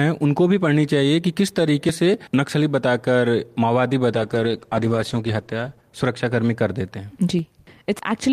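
Speech recording with two faults. Processor overload crackle from 1.89 to 2.21 s, just after "पढ़नी चाहिए कि किस": several consecutive missed buffers, around 10 ms each and skipped, leave hard-edged gaps heard as gritty tearing. A call bitrate drop from 4.18 to 5.93 s, ending just before "सुरक्षाकर्मी कर देते हैं", makes the speech coarse and muffled, which fits an encoder cut from about 48 to 14 kbps for roughly 1.7 s.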